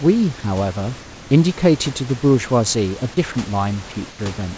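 Speech over a G.722-style call path with nothing above 8 kHz, and two short gaps, at 3.32 to 3.35 s and 4.10 to 4.19 s, where the speech briefly gives way to steady comfort noise, most likely sound dropped by the voice detector mistaking quiet bits for background.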